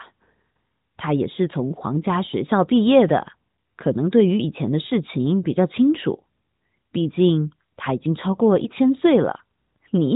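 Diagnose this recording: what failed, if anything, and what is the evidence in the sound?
Nothing has failed: the speech carries the band-limited, lightly shaped sound of the AMR narrowband mobile codec working as designed, with no content above about 3.8 kHz and the mild coding texture expected of its top 12.2 kbps mode, and no dropouts, clicks, level jumps or timing disturbances anywhere in the signal.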